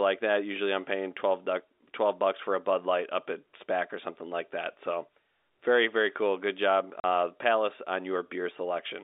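At 7.00 s a 40 ms hole of packet loss filled with silence cuts the speech with hard edges; the waveform drops flat and the spectrogram shows a blank vertical gap, within the 300 Hz to 3.7 kHz G.711 telephone band.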